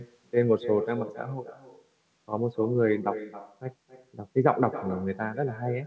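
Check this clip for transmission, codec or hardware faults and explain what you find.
One fault runs through the speech, an uncancelled echo. Echo with no canceller is present throughout: the far end's loudspeaker output reaches its microphone and nothing subtracts it, so every phrase returns about a third of a second later, about 12 dB quieter and thinner. The band stops at 8 kHz, which fits a wideband call codec such as G.722.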